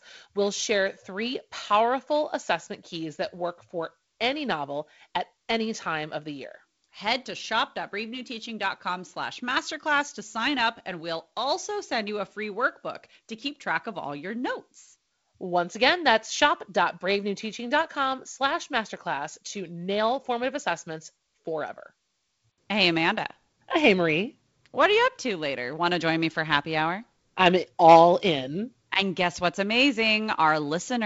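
Nothing in the speech stood out as a fault on listening, and the band above about 7.7 kHz is simply empty, as expected from wideband G.722 telephone coding at 48 kbit/s.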